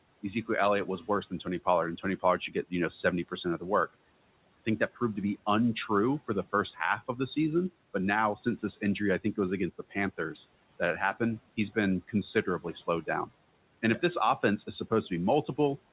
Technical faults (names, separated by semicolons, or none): speech cut by the noise suppressor